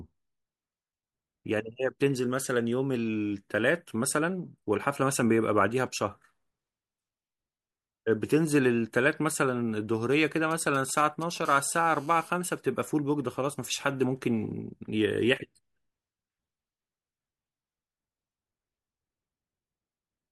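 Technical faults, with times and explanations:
10.51–11.47 s, GSM signalling bursts: a galloping dit-dit-dit of brief buzzes at about 20 dB below the speech. A nearby 2G phone is exchanging short groups of radio bursts with the network, and the audio circuitry rectifies each group into short 217 Hz buzzes.
11.47–12.30 s, GSM phone buzz: the bursts settle into a continuous hard, raspy 217 Hz buzz with many harmonics, about 25 dB below the speech. The phone is now transmitting steadily as in a call, and its pulsed radio signal, rectified in the audio path, becomes an unbroken tone unrelated to the speech.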